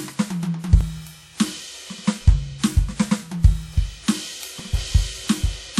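Throughout the music there is a ringing, washy quality, with a hiss that swells and fades with the signal. This is likely WMA compression. Its quantisation noise smears in time, which fits a bitrate near 48 kbps.

At 0.81 s and again at 4.60 s, there is a small jump in the music. These are dropped buffers from an overrun. Each time, a few milliseconds were likely overwritten before being read, and the two sides were joined directly.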